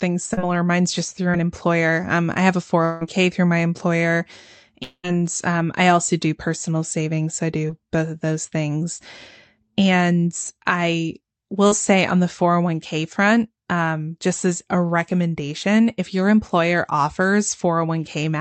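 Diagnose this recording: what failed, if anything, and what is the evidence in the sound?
Network stage, short concealed packet loss: brief smears at 0.33 s, 1.31 s (after "just through") and 11.67 s (before "say on the"). About 20 to 40 ms was missing each time, and the decoder bridged it by extending the preceding sound.

Network stage, likely a long network dropout: at 2.85 to 3.03 s the sound turns into a fading synthetic continuation. At 4.83 to 5.05 s, after "through my employer", a similar fill decays to about 50 ms of silence before "um I also do" resumes.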